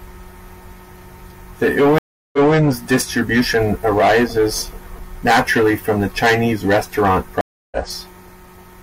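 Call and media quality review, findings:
Stream reconnect, 1.98–2.55 s: 348 ms silence, then playback restarts about 213 ms earlier, repeating audio before "distribution arises naturally from", as a server burst resend would. A fresh decoder fades in its first frame. Second reconnect, 7.41–7.77 s: about 0.3 s silence, resuming roughly 0.3 s later, so material is skipped. A silence followed by a jump in stream position points to a reconnect rather than plain packet loss.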